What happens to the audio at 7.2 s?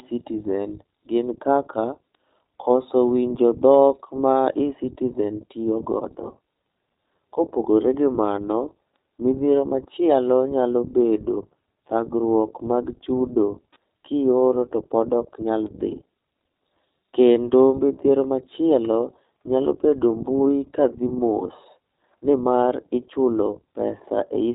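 The speech at 7.2 s, like the whole clip, carries iLBC codec damage: rough, synthetic-sounding speech consistent with independently coded 20 ms frames. A spectrogram shows an abrupt empty band above 3.8 kHz.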